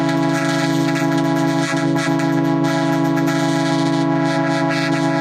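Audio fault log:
No faults are audible anywhere in this clip.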